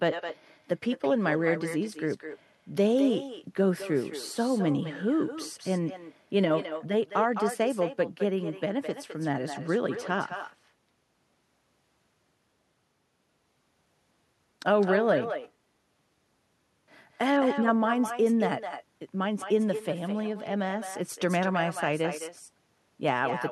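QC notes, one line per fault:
throughout, echo with no canceller: every phrase is trailed by a quieter, thinner copy about a fifth of a second later, sitting about 10 dB under the speech. The far end's loudspeaker feeds its microphone, and nothing strips that return before it travels back.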